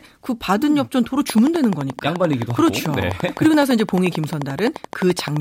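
From 1.30 s to 5.38 s a steady ticking runs over the speech, a train of clicks arriving at a regular 11.6 per second, around fifty in all, each poking out roughly 10 dB above the speech and plainly audible in the pauses as well. The clicks are alike in shape and evenly spaced, which suggests a repeating electrical pulse getting into the signal path, likely interference from nearby equipment or a faulty connection or power supply.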